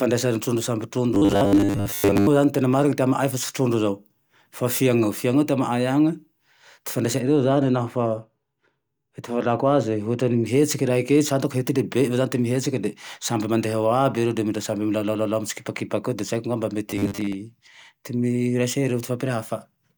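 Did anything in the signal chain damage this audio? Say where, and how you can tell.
Yes. From 1.15 to 2.27 s and 16.91 to 17.35 s, the driver or buffer stage likely starved and looped short chunks, leaving a robotic sound from repeated short buffers. A rigid 100 Hz buzz replaces most of the speech, which fits a 10 ms repeat.

Between 7.20 and 10.46 s, de-emphasis was applied wrongly in processing, a treble cut with no matching pre-emphasis. The response slopes to about 13 dB down at 10 kHz relative to 1 kHz, so the speech turns dull and muffled.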